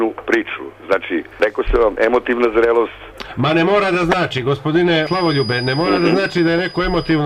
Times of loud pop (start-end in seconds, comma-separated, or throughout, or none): none